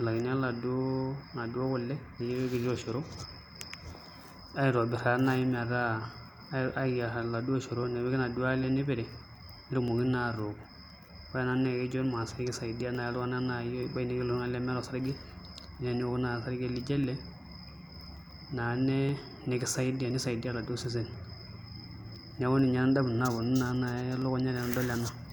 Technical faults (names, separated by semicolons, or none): periodic USB or driver dropouts